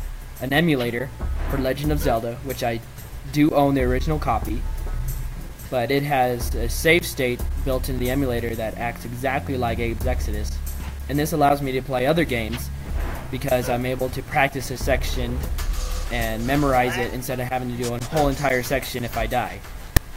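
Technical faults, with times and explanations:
19.97 s, file tags played as audio: a tiny hard-edged rasp, offset to one side, where tag text at the file's end got read as samples.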